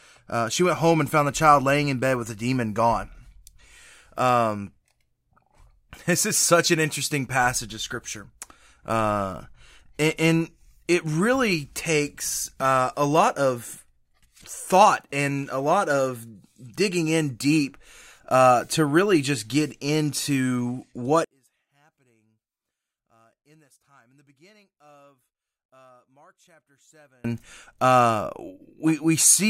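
One channel inverted is the likely cause of the drop from 21.24 to 27.24 s, where the speech falls about 37 dB to a faint trace. With one stereo side's polarity reversed, the centred speech cancels when both sides are summed to mono.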